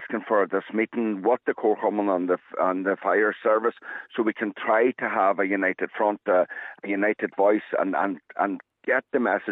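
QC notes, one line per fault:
Nothing stood out on listening to this audio.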